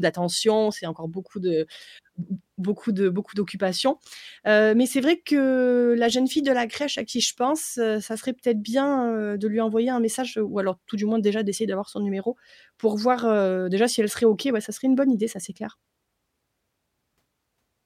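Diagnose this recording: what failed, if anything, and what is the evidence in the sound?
Nothing in the chain points to a failure, as the speech signal continues without any audible break or damage at any stage from capture to playback.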